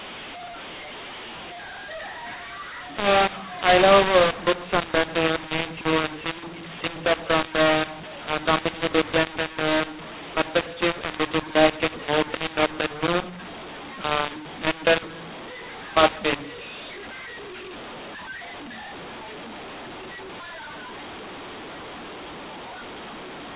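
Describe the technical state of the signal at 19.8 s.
At 19.8 s, as throughout the clip, the speech was coded as G.711 mu-law but decoded as A-law, so the mu-law and A-law mix-up scrambles sample levels. The result is harsh, distorted speech, with the quietest samples pushed up into audible noise in pauses, all within the normal 4 kHz telephone bandwidth.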